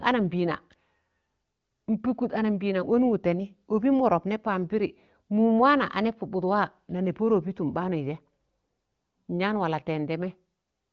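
This speech clip has no technical fault to report. It carries the sound of the AMR wideband (HD Voice) codec, with nothing above about 7.2 kHz and coding clear enough to fit one of its higher rates, such as 18.25 kbit/s.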